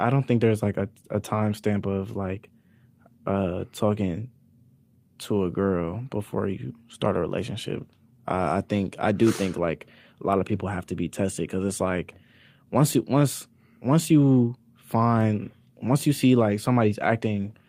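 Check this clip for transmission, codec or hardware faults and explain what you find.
One fault: a lost packet rebuilt from error correction, 7.69 to 7.83 s, after "before you start a". The next packets carried low-bitrate backup copies, so the decoder filled the gap, leaving a brief rough, noisier patch before "I I think I".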